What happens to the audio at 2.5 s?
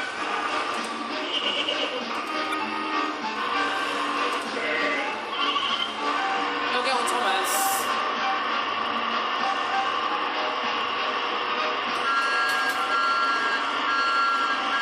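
Damaged data in the compressed stream, from 2.50 to 2.54 s: corrupted bytes make the decoder misread the frames there, lose sync and hunt for the next valid frame header. The result is a brief fault of about 40 ms, heard as a chirp, squawk, click or short hole.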